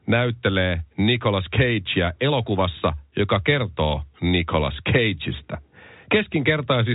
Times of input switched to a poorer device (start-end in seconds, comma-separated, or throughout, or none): none